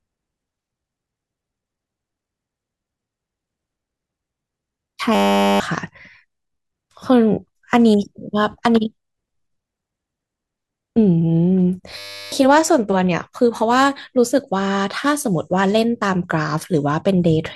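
The system froze twice while the sound hardware kept replaying its ring buffer, a system hang loop. From 5.15 to 5.6 s, and again from 11.98 to 12.32 s, one 10 ms slice of speech repeats exactly, giving a steady buzz at 100 Hz instead of a stutter. When the speech resumes, about half a second is missing after the first hang and about 0.3 s after the second.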